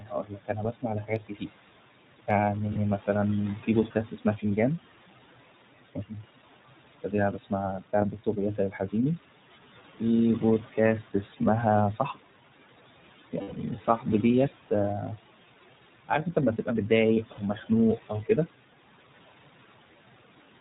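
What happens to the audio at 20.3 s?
At 20.3 s the noise suppressor artifacts that run through the whole clip are still present. The suppressor cuts the room noise by about 17 dB between phrases and lets it back in under the speech. On a spectrogram the gaps look patchy and speckled rather than a steady noise floor.

The iLBC codec is also active at that moment, as everywhere in the clip. It codes each short frame independently, consistent with 20 ms frames and a rate that fits its 15.2 kbps mode. Nothing passes above 4 kHz, and the speech sounds a little rough and synthetic, with the codec damage plainly audible. A spectrogram shows a hard ceiling at 4 kHz, with grainy harmonics below it.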